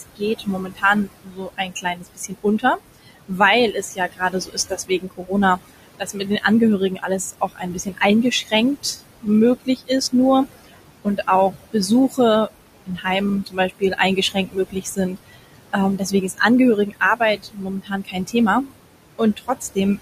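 From the start, noise suppressor artifacts pump the room noise, which sits about 12 dB below the speech, down by about 20 dB between phrases. Between 0.0 and 19.77 s, speech cut by the noise suppressor swallows soft consonants and endings by up to about 21 dB, roughly five seconds in all. These are gaps in the speech itself, not just a thinning of the background.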